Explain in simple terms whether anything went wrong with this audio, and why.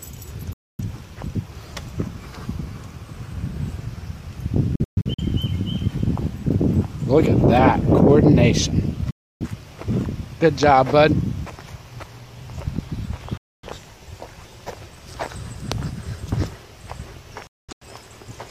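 The audio has a digital broadcast dropout, five times. The sound cuts to silence within a few milliseconds at 0.53 to 0.84 s, 4.75 to 5.22 s, 9.11 to 9.47 s, 13.37 to 13.68 s and 17.47 to 17.86 s. At 4.75 s and 17.47 s the silence comes as several short holes. Each time, about a quarter to a third of a second is lost. The receiver got damaged or missing data, so it muted until good data arrived.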